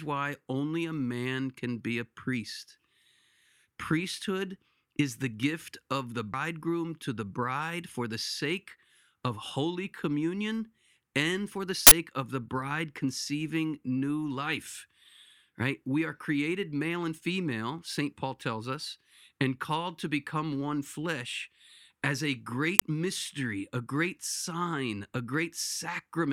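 At 6.33 s the speech has a CD skip: a knock or a disc flaw threw the laser onto a neighbouring turn of the spiral. The player falls silent for roughly 5 ms with a tick, then resumes from a different point on the disc, so the speech jumps forward or back by a whole number of disc revolutions. A plain dropout would pick up where it left off. Here the continuity breaks.

Two uninitialised buffer faults follow, at 11.87 to 11.91 s and at 22.79 to 22.82 s. Each time a block was sent to the output before any audio had been written into it, so whatever stale memory it held was played as samples. The result is a sudden, loud burst of digital noise. The first lasts about 46 ms, which fits a 2048-sample block, and the second about 23 ms, which fits a 1024-sample block. Unlike a single click, each burst fills exactly one block length. Unlike the CD skip, the speech carries on without any jump.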